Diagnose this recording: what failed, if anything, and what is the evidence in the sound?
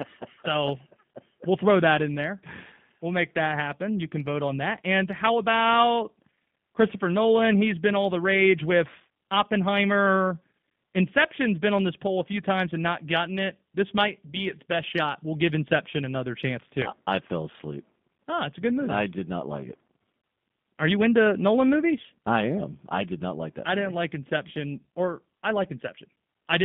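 The codec stage failed: G.729 coding runs through the whole recording. The speech is band-limited to roughly 150 Hz to 3.6 kHz, with nothing above the top edge, and it has a plainly audible rough, synthetic grain. The encoder keeps only a vocal-tract filter, a pitch predictor and a few pulses per 10 ms frame, then resynthesises the speech, which points to an 8 kbit/s G.729A link.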